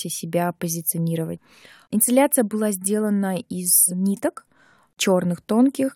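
Listening to the speech recording, nothing stood out as a technical problem at any point.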